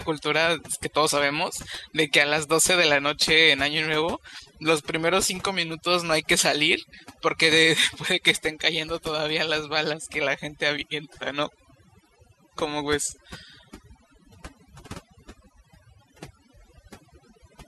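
Overdone noise removal is present throughout. The noise reduction was set too strong, so frequency bands near its noise estimate are cut hard or gated out, taking quiet speech detail too. The background in pauses drops and breaks up into twinkling specks.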